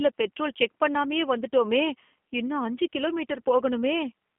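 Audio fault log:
Throughout, G.729 codec damage: the speech has been squeezed through an 8 kbit/s G.729A-style coder, so it's rebuilt from a vocal tract filter, a pitch predictor and a few pulses per frame. That gives it that plainly rough, buzzy, slightly synthetic edge, and nothing above about 3.4 kHz survives, so it sounds boxed-in and telephone-narrow. The faint room noise, about 54 dB down, just sits underneath it.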